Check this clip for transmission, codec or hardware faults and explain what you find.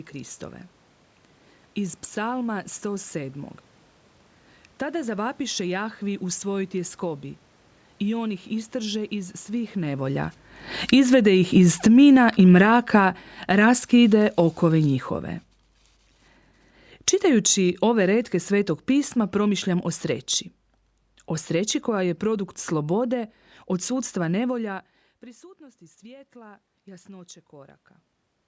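The clip has three level faults from the automatic gain control, two lowering the gain and one raising it.

Automatic gain falling occurs twice: from 8.02 to 15.08 s, by about 13 dB, and from 17.24 to 24.62 s, by about 6 dB. Each time the control judged the input too loud, or its background noise too strong, and pulled its gain down gradually over several seconds, so the sound sinks slowly. The room noise sinks with it. That shared fade separates it from the talker moving around 10 s, which shifts only the voice against a steady background.

Automatic gain rising runs from 25.57 to 27.89 s. The input level had fallen by about 22 dB, and the control responded by lifting its gain by about 5 dB over roughly two seconds. Voice and background noise swell together during that stretch. Around 24.5 s, where the talker's position changes, the voice alone shifts against the room. The gradual, joint rise in both voice and noise marks the gain control rather than movement at the microphone.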